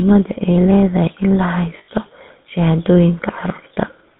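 From start to finish the speech runs through the GSM full-rate codec, which models the vocal tract as a filter and drives it with a coarse, regularly spaced pulse excitation, holding only every third excitation sample at a rate that fits the 13 kbps full-rate mode. The line is confined to about 150 Hz to 3.6 kHz, so the top and bottom are gone, and the codec's damage is plainly audible as a buzzy, gravelly roughness over everything.

From 1.78 to 1.89 s there are lost GSM frames. For about 100 ms, which fits five dropped 20 ms frames, the decoder had no valid data and kept reusing the parameters from the last good frame. Instead of a gap, that stretch comes out as a held, rough, metallic ring before normal decoding resumes.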